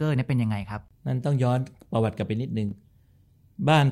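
At 2.69 to 2.72 s, chunks out of order: one 10 ms chunk of the speech plays two chunks late, after the pieces meant to follow it. It is heard as a brief jumble, and the waveform shows three abrupt discontinuities, with vertical broadband lines on a spectrogram.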